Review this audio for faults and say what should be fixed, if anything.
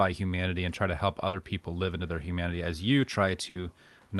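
Burst of packet loss occurs twice, at 1.27 to 1.36 s and at 3.49 to 3.58 s. Each time a run of packets arrived too late or not at all. The receiver had nothing to play, so it filled about 60 ms by extending the last sound and fading it down, which leaves a held buzz or a dying hiss. About 60 ms of the actual speech is lost at each point, and playback jumps ahead when it resumes. The call codec's top cut-off sits near 12 kHz. To prevent the dropouts, enable in-band FEC or packet redundancy and give the jitter buffer enough depth to absorb late packets.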